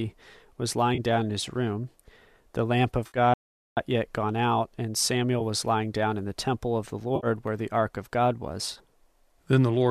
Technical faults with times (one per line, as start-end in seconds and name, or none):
0.94-1.00 AAC frame loss with concealment
3.06-3.18 AAC frame loss with concealment
3.34-3.77 audio dropout to silence
5.39 AAC frame loss with concealment
7.16-7.27 AAC frame loss with concealment
8.72-8.78 AAC frame loss with concealment